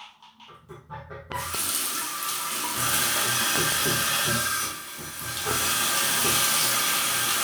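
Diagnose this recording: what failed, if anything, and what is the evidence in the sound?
What failed is the analogue side, most likely a loose plug, a flaky switch contact or a static discharge putting voltage pulses into the line. You get loud pops, each one a quick double, at 1.32 to 1.57 s, 3.56 to 3.74 s and 5.51 to 5.58 s. The first two jump roughly 15 dB above the sound and the last one about 10 dB. The sounds keep going underneath each pair, so the pulses are added on top rather than cutting the signal.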